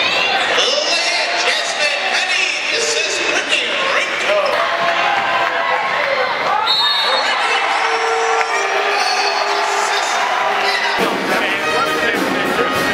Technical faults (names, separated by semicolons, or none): Bluetooth SBC bit pool drop